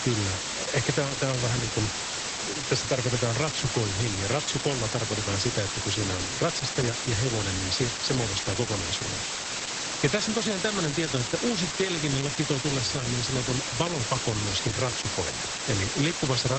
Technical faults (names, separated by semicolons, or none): low bit depth with dither; Opus voice compression